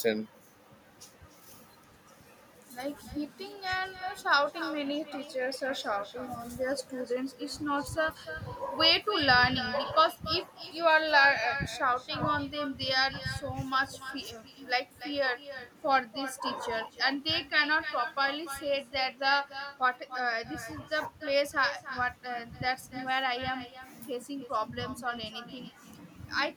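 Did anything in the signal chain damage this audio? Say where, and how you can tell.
Yes: echo with no canceller, present throughout the speech. This is a call-processing fault. Every phrase is followed, roughly 300 ms later, by a thinner copy about 12 dB quieter. The far end's loudspeaker feeds its microphone, and nothing subtracts that returning signal.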